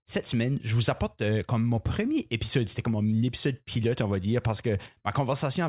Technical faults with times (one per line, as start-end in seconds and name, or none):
none